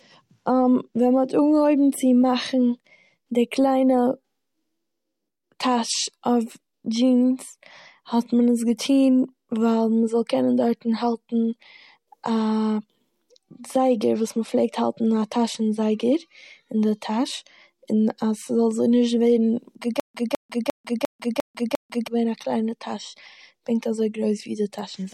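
At about 20.0 s the speech hits a stutter with silent gaps that runs until roughly 22.08 s. A chunk of about 204 ms replays six times, each followed by around 147 ms of dead digital silence, so it pulses at a steady 351 ms. The likely cause is a stalled player or stream that re-served its last fragment on each retry and then ran dry, and whatever speech belonged in those two seconds is simply gone.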